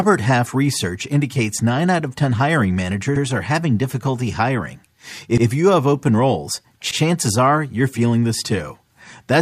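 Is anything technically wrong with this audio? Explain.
Yes. The speech has three repeated buffer faults, at 3.16 to 3.24 s, 5.38 to 5.46 s and 6.91 to 7.00 s. At each one, fresh audio arrived late, so the device played its last block again. An 85 ms stretch sounds twice, with a hard join where the repeat begins. That length fits a 4096-sample buffer. Each event is heard as a short stutter. Essentially no audio goes missing. It is only delayed.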